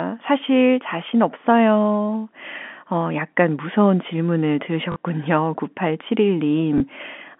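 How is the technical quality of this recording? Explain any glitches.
The recording comes through a telephone-band line, roughly 200 Hz to 3.5 kHz, and has two brief packet-loss glitches.

Packet loss with last packet repeated at 4.92–4.96 s, just after "어 약간 무서운 질문을", and at 6.78–6.80 s. Lost audio, about 40 ms then 20 ms (fitting 20 ms packets), was replaced by replaying the previous chunk. This gives a short robotic stutter the first time and a small blip the second, instead of the silent gap of a plain dropout.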